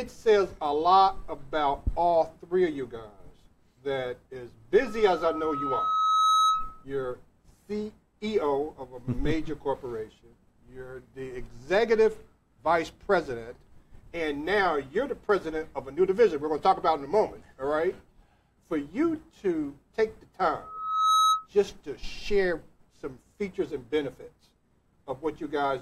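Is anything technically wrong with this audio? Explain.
Yes. Loudspeaker feedback squeal occurs twice, from 4.81 to 6.85 s and from 20.61 to 21.47 s, both times at 1.3 kHz. A microphone is picking up the loudspeaker it feeds, and at that frequency the loop gain exceeds one, so the tone reinforces itself on each pass. It swells over about a second and a half the first time and about half a second the second, peaking a few dB above the surrounding audio before it stops.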